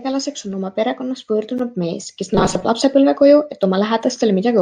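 From 2.35 to 2.65 s, after "perekonnast võõrdunud mees kes", audio likely arrived too seldom, so playback looped a buffer of about 5.3 ms, repeating roughly half the sound. This robotic sound from repeated short buffers imposes a rigid, metallic 188 Hz buzz.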